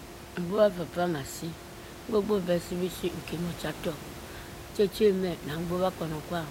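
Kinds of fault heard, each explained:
No technical faults can be heard in this speech clip. Background noise from the room sits about 14 dB below the speech, and it belongs to the recording itself.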